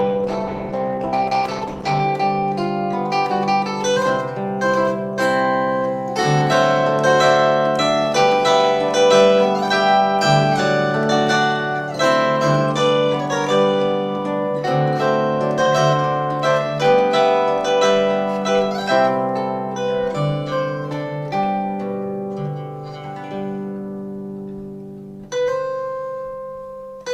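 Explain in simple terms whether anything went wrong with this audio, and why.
For the first 2 s, the audio sounds dull and smeared. This is an adaptive stream starting at a low bitrate. Quality then jumps up without a break.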